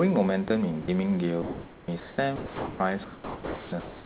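Speech, heard through a narrowband call path with nothing above 4 kHz, which fits G.711 mu-law. Room noise sits about 26 dB below the speech. Several gaps interrupt it. At 0.48 s, and again from 0.82 to 0.88 s, a brief piece of speech vanishes into steady hiss. Longer losses follow from 2.36 to 2.8 s and from 3.04 to 3.72 s. The likely cause is sound dropped by the voice detector. The sender judged real speech to be background and stopped sending. The receiver filled each hole with comfort noise.

Comfort noise in place of the background is also audible. From 1.42 to 1.88 s, from 2.0 to 2.18 s, and from 3.8 s to the end, the natural room sound turns flat and featureless. It is likely synthetic noise generated during discontinuous transmission. Its level shifts slightly at each switch. It is about 2 dB louder in the first stretch, about 1 dB quieter in the second, and about 1 dB louder in the last.

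At 1.86 s, speech resumes abruptly, without its soft start. This is likely an onset clipped by the voice detector. The detector reacted late, so the first moment was never sent.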